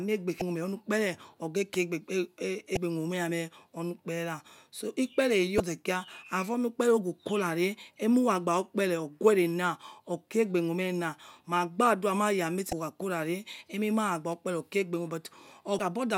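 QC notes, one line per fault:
0.39–0.42 s, 2.74–2.77 s, 5.57–5.60 s, 12.70–12.73 s, 15.77–15.80 s: damaged data in a compressed stream. Corrupted bytes make the decoder misread these frames and lose sync until it finds the next valid frame header, so each 30 ms stretch of speech becomes a short chirp, squawk, click or hole.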